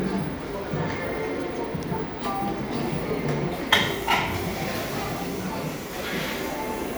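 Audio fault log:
No faults were found in this audio.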